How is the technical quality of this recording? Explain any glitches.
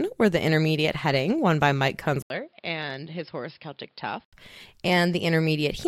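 The recording has one clear fault, a change of input device partway through the speech.

From 2.22 s to 4.33 s the input is likely switched to a poorer device, probably another microphone or a headset call profile. An 80 ms gap marks the switch, and the level then falls by roughly 10 dB. Nothing above 5.2 kHz gets through, so the speech turns dull and boxy. A new noise floor sits about 40 dB below the signal.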